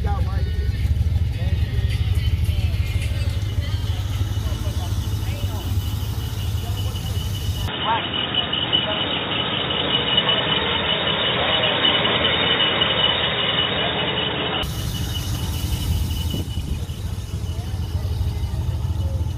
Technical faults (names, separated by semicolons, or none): input switched to a poorer device